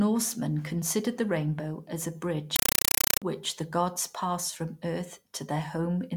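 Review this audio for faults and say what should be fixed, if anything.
From 2.56 to 3.22 s, between "the rainbow as a" and "the gods passed from", the speech is replaced by loud, chattering static: a compressed stream played as audio. An AC-3 (Dolby Digital) bitstream, which points to about 256 kbps, reached the output as raw samples instead of being decoded. Each frame becomes a 5.33 ms burst of loud noise followed by silent padding, repeating at 31.25 Hz. On a waveform this shows as a comb of dense blocks with flat gaps; on a spectrogram it appears as broadband vertical stripes. Set the output to decode AC-3, or pass it through only to a receiver that signals Dolby Digital support.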